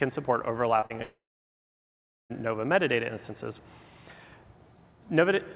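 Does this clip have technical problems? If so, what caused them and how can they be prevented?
Yes. Around 0.80 to 0.84 s and again 0.86 to 0.92 s there's short concealed packet loss: packets arrived too late, so the receiver stretched out the preceding sound for about 20 and 40 ms, leaving a quick smear or wobble. A better network connection or a slightly deeper jitter buffer should prevent it.

From 1.02 to 2.32 s there's a long network dropout. The last sound carries on briefly as a fading buzz or hiss, then about 1.1 s of silence follows, and the audio picks up later without that stretch. The likely cause is a stall in the network connection. A stable wired connection and proper bandwidth for the call would prevent it.

Nothing above 4 kHz comes through, which is simply how the G.711 A-law call path sounds.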